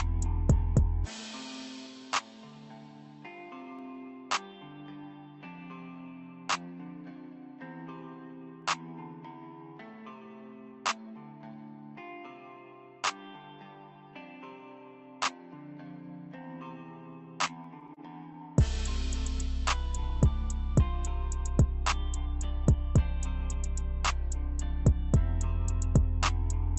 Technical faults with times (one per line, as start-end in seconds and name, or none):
3.79 dropped samples
8.62 dropped samples
17.47-18.37 repeated stalls (stutter)
17.64 dropped samples